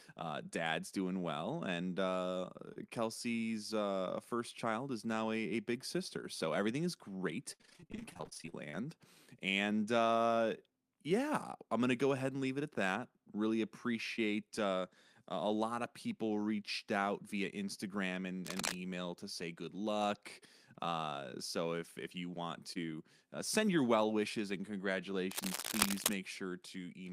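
Just after "doing well and uh", from 2.73 to 2.77 s, there is a short concealed packet loss. About 20 ms of audio, which fits a single 20 ms packet, did not arrive in time. The receiver extended the preceding sound to bridge the gap and then crossfaded back into the real signal, leaving a brief smear in the speech.

From 7.53 to 8.82 s, following "so everything is great", repeated packet loss produces robotic sound. Some two dozen dropouts occur in quick succession, the longest about 61 ms. Concealment fills roughly 44 percent of that stretch, so the speech turns choppy and metallic, with fragments missing because one patch barely ends before the next begins.

A second short concealed packet loss, again about 20 ms, falls at 14.16 to 14.19 s and is heard as a quick smear.

From 18.45 to 18.74 s, cable scratch noise appears as dense, irregular crackling bursts about as loud as the speech itself. 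Its likely cause is a worn cable, connector or control being disturbed, so that its contact resistance fluctuates rapidly.

At 22.73 to 22.77 s, between "if if you want" and "uh send your well", a third short concealed packet loss of about 20 ms briefly blurs the transition.

Cable scratch noise returns from 25.31 to 26.15 s. This is a longer bout of scratchy rustling, again at roughly the level of the speech.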